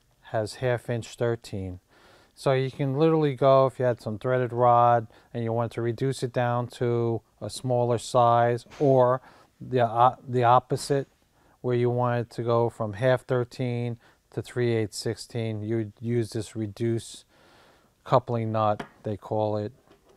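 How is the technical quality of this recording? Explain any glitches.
No glitches turn up anywhere in the recording: there are no dropouts, clicks, distortion or timing faults to report.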